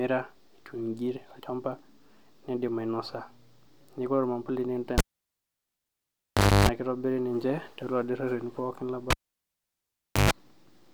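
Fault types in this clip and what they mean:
Cable pulled and plugged in: a pop drops the speech to near silence for 1.66 s at 4.98 s and 1.15 s at 9.10 s, then 50 Hz buzz (0.30 s, 0.13 s) and another pop. A live lead was yanked and reinserted, its tip touching first.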